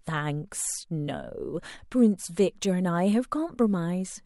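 The converter's sampling clock wanders throughout the recording, a case of sample clock jitter on the order of a couple of microseconds, so each sample is captured slightly early or late. Because the timing error turns into an amplitude error wherever the waveform moves fast, the speech carries a fine hiss and roughness roughly 35 dB below the signal, thickest on loud and bright sounds such as sibilants and dropping away entirely in the pauses.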